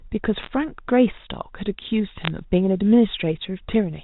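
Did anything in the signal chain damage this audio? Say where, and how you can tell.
Yes. Bit errors on a digital phone line, in the network stage, flipped bits in the G.711 stream at roughly 0.5 and 0.4 percent. Each error alters one sample, so sharp ticks and crackle sit over the 4 kHz-limited speech from 0.36 to 0.5 s and again from 2.24 to 2.28 s.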